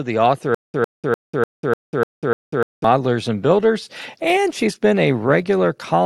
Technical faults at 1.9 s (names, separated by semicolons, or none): stutter with silent gaps